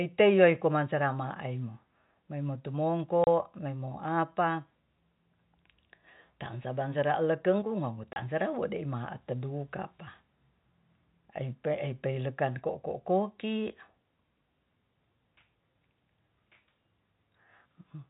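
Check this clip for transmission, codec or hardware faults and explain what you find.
Two short dropouts from packet loss filled with silence. At 3.24 s and again at 8.13 s, a stretch of audio never arrived and the receiver inserted silence. Each gap lasts 30 ms, which fits a single lost packet, and its abrupt edges cut the speech off sharply. The audio is band-limited in the way of G.711 telephone coding, with nothing above 4 kHz.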